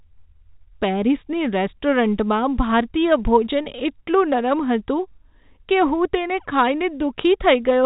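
Speech over a telephone-coded line, with no technical faults.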